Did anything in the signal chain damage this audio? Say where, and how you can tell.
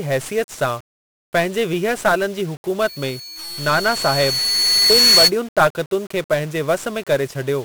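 Yes. 1-bit DFPWM compression affects the whole clip, so the damage happened at the codec stage. The speech is heavily fuzzy and crackly throughout, and the treble is dulled or replaced by broadband hiss. That is the sound of a coder that keeps only one bit per sample, nudging an adaptive level up or down each time. The coarse steps leave strong quantisation noise everywhere. The texture fits a 48 kbps stream, one bit for each sample.

A loudspeaker feedback squeal runs from 2.80 s to 5.32 s. This fault lies in the acoustic loop between playback and capture: a microphone picked up the loudspeaker it was feeding. A single tone at 4.4 kHz swells over roughly two seconds until it sits about 10 dB above the speech. At that frequency the loop gain exceeded one, so the tone fed itself until it stopped at 5.32 s.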